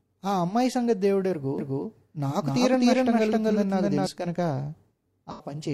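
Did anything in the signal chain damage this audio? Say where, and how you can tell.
Yes. From 1.59 s to 4.07 s the speech is doubled: a second, full-band copy about as loud as the original trails it by roughly 300 ms, with no decay or room colour, and it cuts in and out abruptly at both ends. That dry, equal-level repeat is a doubled audio track rather than an echo. The likely cause is the same signal being captured a second time through a slower path, or an edit leaving two copies out of step.

At 5.31 s to 5.49 s there is a brief smeared, phasey patch where the sound turns noisy and loses its detail. This is AAC frame loss with concealment at the codec, probably after a network or storage drop. The gap spans about 85 ms, which fits two lost AAC frames, and the decoder bridged it by reusing the last good spectrum with scrambled signs or interpolated energy rather than passing real audio.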